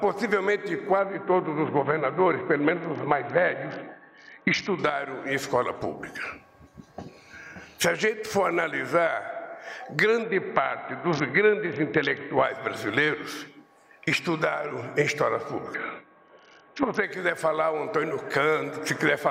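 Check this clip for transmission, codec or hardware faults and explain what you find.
The clip has one recurring transmission fault: a Bluetooth SBC bit pool drop, heard three times. It runs from 0.99 to 4.79 s, 10.23 to 12.44 s and 15.74 to 17.04 s. The link apparently got congested, so the encoder cut its bit budget. The sound points to a bit pool falling from about 28 to 6, near 60 kbps. The top sub-bands starve. The treble goes dull and a gritty grain rises, then clears when the rate recovers.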